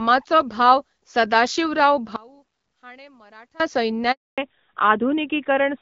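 From 2.16 to 3.60 s the speech drops by about 26 dB and turns faint, likely one channel inverted so the shared centre cancels when the stereo is summed to mono. At 4.12 s there's a handover gap: the call switches networks, no speech gets through, and the voice fades to 260 ms of silence until 4.38 s. From 4.38 s to the end there's a fallback to narrowband, where the call drops from HD Voice to the older codec, nothing above 4 kHz survives, and the voice goes duller and rougher.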